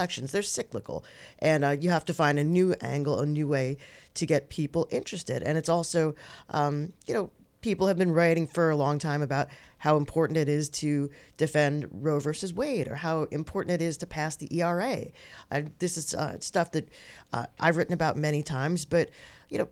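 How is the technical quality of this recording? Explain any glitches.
The recording has no technical faults. There are no glitches to explain.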